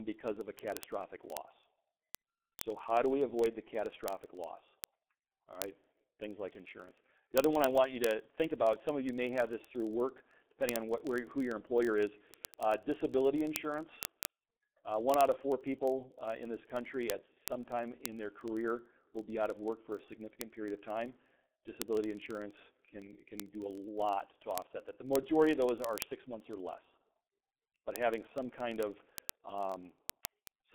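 From the first moment the speech carries heavy G.723.1 codec damage. The sound fits a low-rate telephony coder running at about 6.3 kbit/s. The line band runs from about 200 Hz to 3.5 kHz, so voices are muffled and hoarse, and consonants smear together because the coder's model of the voice changes only once per frame. On a spectrogram, energy stops at about 3.7 kHz, leaving empty space above. Below that cutoff the harmonics look blocky and blurred from one frame to the next.

From 0.12 s to the end, word clock ticks run underneath. The receiving device keeps its own clock, which is not locked to the sender's and differs from it by roughly 1000 parts per million. The two clocks slip past each other about every 20 ms, and at each slip one sample is dropped or repeated. This produces sharp ticks of uneven strength at a steady rate of around fifty per second, well over a thousand in all. On the waveform they appear as single-sample steps. 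On the spectrogram they show as evenly spaced thin vertical lines.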